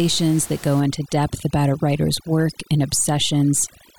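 From 0.8 s to the end, overdone noise removal strips bands near the room noise, about 21 dB below the speech, leaving twinkling specks rather than codec smearing.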